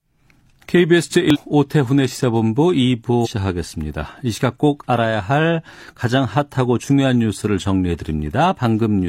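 At 1.30 to 1.37 s and 3.21 to 3.28 s, damaged data in a compressed stream makes the decoder misread frames and lose sync, producing brief glitches in the speech.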